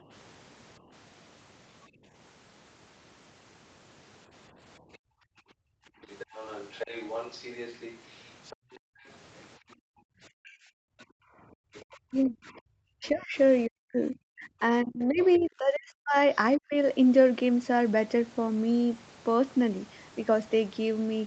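Speech, carried over what sounds like a wideband call with nothing above 8 kHz, shows three echo-canceller problems. From 0.0 to 11.74 s the background is gated by the echo canceller: while the far end plays, the canceller pulls the microphone down hard, as deep as about 40 dB, so the room sound drops out for around three seconds in total before returning when the canceller releases. From 4.93 to 16.36 s the other side's voice leaks through, a second talker sitting well under the main one, roughly 20 dB down, likely because the echo canceller left residual loudspeaker pickup in the microphone signal. From 10.43 to 16.74 s the talker's speech is suppressed in double talk, dipping by up to about 40 dB across roughly three seconds in all, likely because both sides spoke at once and the canceller, unable to separate near speech from echo, attenuated both.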